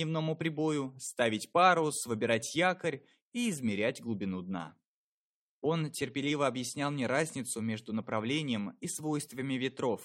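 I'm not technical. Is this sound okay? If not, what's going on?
Yes, nothing wrong can be heard in this sound. There are no technical problems to point out anywhere in it.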